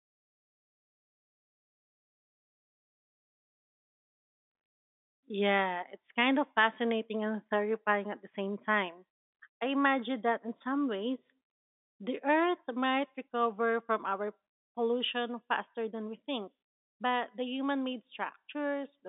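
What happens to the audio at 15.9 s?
Nothing goes wrong at 15.9 s: the speech carries on intact through that moment, still within the narrow telephone band of the G.711 line.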